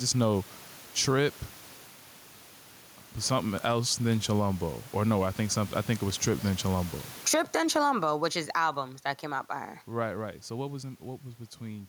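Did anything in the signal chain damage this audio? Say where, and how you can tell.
Yes, and it runs through the whole clip: gain pumping. The room background sits about 35 dB under the speech, which is normal in itself, but the gain swings by something like 15 dB. That points to the input stage, most likely the mic gain set far too hot with a fast limiter or compressor clamping every loud moment, which squashes the dynamics flat.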